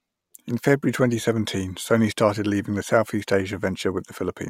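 Listening to the speech recording, nothing technically wrong stood out.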